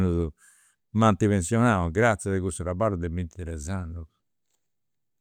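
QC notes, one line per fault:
Nothing to flag here, the speech comes through without any technical faults to note.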